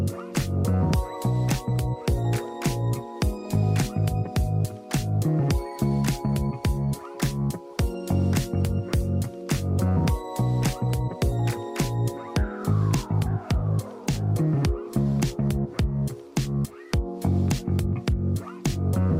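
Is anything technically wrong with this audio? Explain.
No, nothing technically wrong stood out on listening to this audio.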